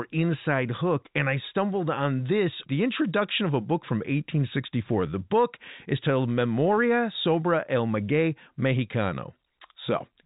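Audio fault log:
The speech has passed through ordinary G.711 telephone coding, with nothing above about 3.8 kHz and at most a faint level-following quantisation hiss.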